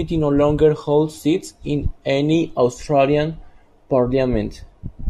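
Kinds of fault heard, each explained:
No faults are present in this speech recording. Nothing in it points to a technical problem of any kind.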